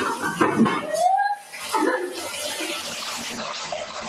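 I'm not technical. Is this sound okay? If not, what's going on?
No. Three things are wrong.

Throughout, there's a noise suppressor applied to music or sounds. A filter meant for calls treats steady, lingering parts of the sound as background noise and turns them down, so the level keeps noticeably pumping and sagging. Sharp starts come through.

From 1.36 to 1.55 s you hear a sound cut by the noise suppressor. For about a fifth of a second, that part sinks clearly below everything around it. It's a brief dip in loudness, not a gap or a change in tone.

From 2.82 s to the end, there's a call bitrate drop. The connection cut the amount of data sent, so the sound becomes rough and muffled, with everything above about 8 kHz gone.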